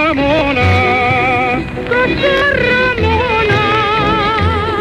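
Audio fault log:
0.39–0.41 s and 2.37–2.42 s, Bluetooth stutter: the receiver ran short of data and replayed its last slice of sound. At 0.39 s about 20 ms repeats once. At 2.37 s about 40 ms is filled, which fits two lost packets and gives a brief buzzy double stutter. Afterwards playback jumps ahead as though it had kept running. A spectrogram shows a short repeated block with vertical seams at each splice, and the waveform shows an identical cycle copied in place.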